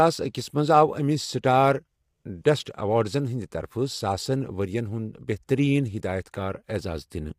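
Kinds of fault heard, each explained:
Low-delay AAC compression: The speech sounds rough and grainy throughout, with noise between the pitch harmonics and a thin, synthetic top band. Very short coding frames resolve pitch poorly. This likely comes from AAC-ELD coding, fitting a rate near 32 kbps.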